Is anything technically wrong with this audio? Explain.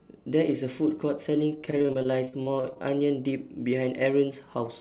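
Yes. From 1.58 to 2.83 s there is repeated packet loss, giving a robotic sound. Many short gaps, up to 40 ms, are patched by stretching earlier audio. About 30% of that stretch is concealed, so it sounds choppy. The call path's narrowband, telephone-style coding has nothing above 4 kHz.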